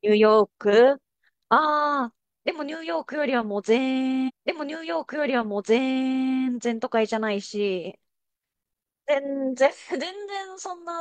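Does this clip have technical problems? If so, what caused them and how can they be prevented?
Yes. A stream segment repeated: at 4.25 s the audio jumps back with a small blip and replays about 2.0 s of speech, running to 6.25 s, because the player fetched or queued the same segment twice. Tracking segment sequence numbers and discarding duplicates before buffering prevents this.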